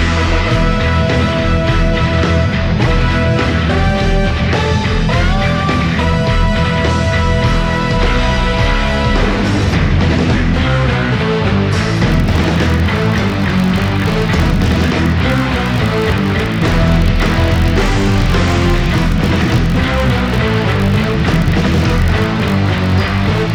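From 12.1 s to the end of the clip, a filter restarted on every block produces a 50 Hz buzz. The filter discards its internal state at each block boundary and starts again from silence, so every block opens with a small transient. Fifty of these per second point to blocks about 20 ms long. Unlike mains hum at the same frequency, this buzz rises and falls with the level of the sound.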